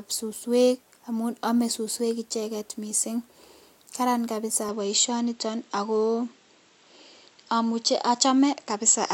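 A speech recording whose tone changes at 4.69 s: from there to the end nothing above 7.8 kHz remains and a faint new noise floor appears, with no gap or level jump. That points to the input likely switched to a poorer device, not a filter, which wouldn't add fresh background noise.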